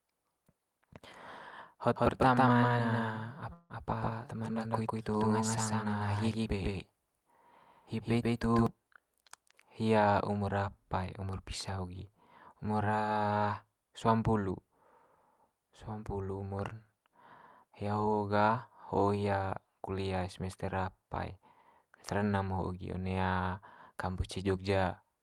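From 1.96 to 8.67 s the speech carries a doubled audio track: a second full-band copy, about as loud as the original, trails it by roughly 150 ms and cuts in and out abruptly. It is likely a second capture through a slower path.

Within that stretch, from 3.53 to 3.72 s, there is a call audio freeze. The last sound is stretched into a fading buzz or hiss for 164 ms, with a brief 20 ms silence, and then the speech resumes where it stopped with nothing lost. The likely cause is delayed packets draining the jitter buffer.

Two jitter buffer speed-ups follow, from 10.39 to 11.19 s and from 16.21 to 17.09 s. Short pitch-period slices are removed to shed excess buffered delay, about 70 ms and then about 100 ms. The speech runs 7% and 11% fast at unchanged pitch and sounds hurried.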